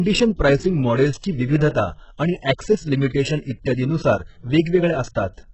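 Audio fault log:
Throughout: HE-AAC compression, likely from a very low bitrate around 8 kbps, with nothing above 8 kHz; rebuilt upper bands leave sibilants gritty, metallic and lispy across the speech.
1.69–1.75 s: pre-echo, block-spread quantisation noise smearing about 59 ms ahead of the attack after "प्राइसिंग मॉडेल्सची", so a short hiss precedes "आणि ऍक्सेस लिमिटेशन इत्यादीनुसार" and softens its onset.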